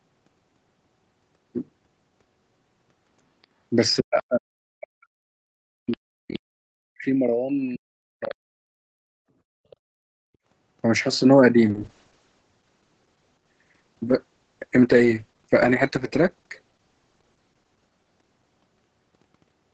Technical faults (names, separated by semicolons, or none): speech suppressed in double talk; other side's voice leaking through; call bitrate drop